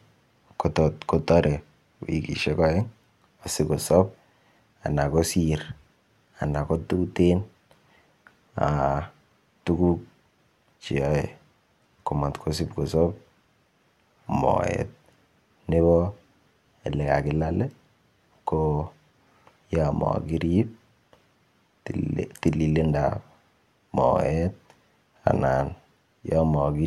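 At 25.26 s a sudden gain jump raises speech and background noise together by about 6 dB until 25.36 s, likely a gain setting applied without a ramp.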